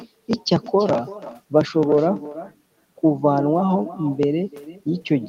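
Right from the start and all the way through, the speech has an echo with no canceller behind it. The far end is playing the call out of a loudspeaker, their microphone is catching it, and nothing strips it out, so it rides back over the network. You hear everything shadowed roughly a third of a second later by a copy about 16 dB down, thinner than the original.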